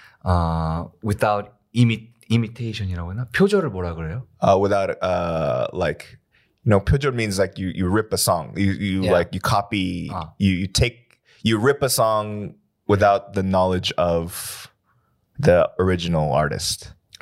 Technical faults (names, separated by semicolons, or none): none